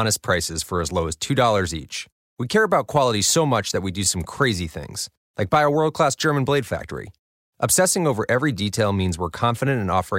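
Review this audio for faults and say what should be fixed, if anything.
Hard clipping occurs at 2.96–3.03 s, 4.42 s and 5.54–5.57 s, with the speech driven about 2, 1 and 3 dB past what a stage could pass. Peaks are cut flat, adding high harmonics heard as brief crackle. Set gain lower before conversion to leave headroom.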